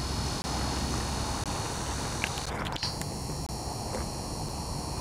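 Gaps between stream segments at 0.42–0.44, 1.44, 2.46, 3.46–3.49 and 4.49 s: mismatched segment timestamps leave hard-edged silences of 4 to 24 ms, repeating every second.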